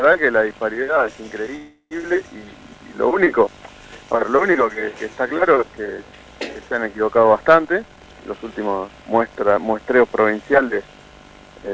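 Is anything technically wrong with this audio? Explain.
Yes, there are two faults. Around 1.56 to 1.93 s there's a call audio freeze: the last sound stretches into a fading buzz, ending in about 60 ms of silence, then carries on where it left off. That's likely packets stalling in transit and the jitter buffer running dry, so roughly 350 ms of gap got inserted without losing anything.

From 7.65 to 9.22 s you get a jitter buffer speed-up. The buffer was overfull, so the receiver kept snipping out tiny pitch-period chunks, around 0.4 s in total. Playback runs at about 122% speed with the pitch unchanged, so that stretch sounds noticeably rushed. The band stopping at 8 kHz is just the G.722 call codec.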